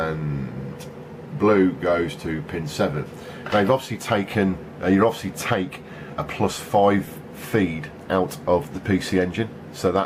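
At 7.06 s the playback path ran dry: fresh audio did not arrive in time, so the device sent its most recent buffer out again, twice over. That 5.8 ms piece, which fits a 256-sample buffer, therefore sounds three times in a row, with a hard join at each repeat. Because the repeated piece is so short, the result is a click or a brief buzz rather than an obvious stutter. This is a repeated buffer, and essentially no audio appears to have been lost to it.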